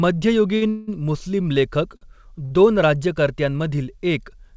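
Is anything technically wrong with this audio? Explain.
Yes. Short stalls from late packets occur at 0.56–0.64 s, 1.97–2.04 s and 2.45–2.54 s, the latter two just before "दोन राज्यकर्त्यांमधील". In each, the jitter buffer ran dry and the receiver stretched the last sound for about 50 ms until the packet arrived, giving a held sound with a slight buzz or dip.

A call audio freeze runs from 0.69 to 0.90 s. Packets were likely delayed in transit, emptying the buffer, so about 180 ms of continued, fading buzz or hiss is inserted before the audio resumes. Nothing is lost, and it never drops to silence.

Behind both, the G.722 call path leaves nothing above 8 kHz.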